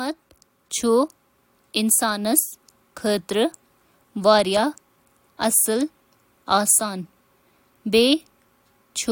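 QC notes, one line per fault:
No fault found in this clip.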